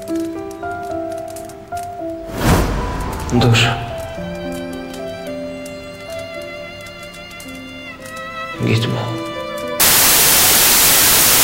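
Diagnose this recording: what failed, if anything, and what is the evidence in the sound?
From 9.8 s to the end, sample-format conversion failed: a wrong sample width, with 16-bit data read as packed 24-bit, which mixes bytes across samples. Loud noise buries the sound, which runs 1.5 times fast and high. A spectrogram shows a sudden broadband wash, and the waveform jumps sharply in level.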